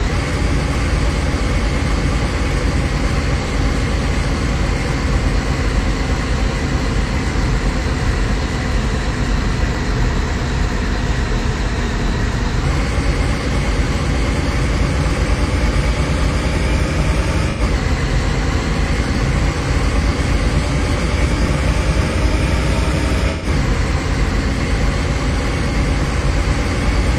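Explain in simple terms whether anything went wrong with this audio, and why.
AAC frame loss with concealment occurs three times, at 3.42–3.48 s, 17.50–17.61 s and 23.31–23.46 s. Unlike a clean dropout to silence, each brief gap is filled with a smeared, noisy echo of the preceding sound, growing longer as one, two, then three frames go missing.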